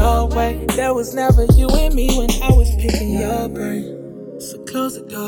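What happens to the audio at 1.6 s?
At 1.6 s the channels are drifting apart, as they do across the whole clip. Each side runs on its own clock, roughly 150 ppm off. Their offset creeps up to under a millisecond. Summed to mono, sweeping comb notches give a slow flange.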